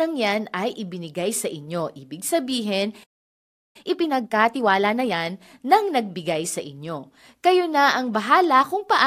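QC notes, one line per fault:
3.03–3.76 s, playback stall: the speech cuts out abruptly in mid-flow and the output drops to dead silence for about 0.71 s before resuming. There is just a hole where the sound stops and then carries on. The likely cause is the player running dry of buffered audio, or its output thread being held up, so nothing reached the device until data flowed again.
3.76–5.16 s, time-compressed catch-up: straight after the gap the speech runs hurried, at about 1.5 times normal speed, with the pitch unchanged. The player is clearing the backlog built up during the stall by dropping short slices of audio and cross-fading the joins. That keeps the pitch steady but shortens the timing until playback is back in step.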